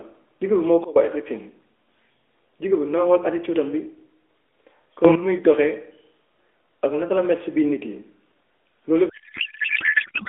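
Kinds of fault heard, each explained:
Sudden gain jump: the level changes abruptly between adjacent samples with no ramp, so speech and background noise shift together, likely from a gain setting applied instantly. Here the level drops by about 18 dB near 0.84 s and rises by about 12 dB near 5.05 s.
Codec payload misread: the AMR frames are packed in octet-aligned form but decoded as bandwidth-efficient, so the decoder pulls its parameters from the wrong bit positions. From about 9.1 s to the end, the speech gives way to garbled noise and warble that barely tracks it.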